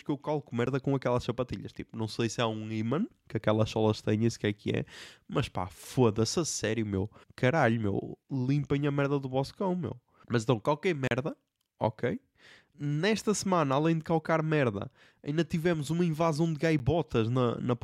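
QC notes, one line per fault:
0.66 s, 11.07–11.11 s and 16.79 s: block of digital silence, cutting straight to zero and back after "que eu calco" (10 ms), "então qualquer" (about 36 ms) and "tivemos uma invasão de" (10 ms). The short ones tick or dip and the longer one leaves a tiny hole.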